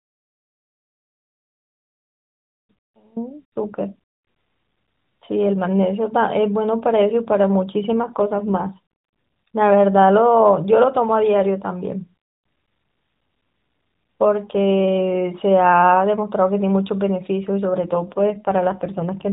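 Speech carried over an AMR narrowband mobile link, with nothing above 4 kHz. An audio dropout to a faint residue is already under way as the clip opens and lasts until 3.16 s: only faint sound is left, roughly 25 dB below the signal, likely from a break upstream while the path stayed live. Two AMR rate drops, at 7.92 to 8.79 s and 17.82 to 19.29 s, leave the band unchanged but make the sound rougher and more synthetic, consistent with the codec falling from 12.2 kbps to a lower rate around 5.9 kbps.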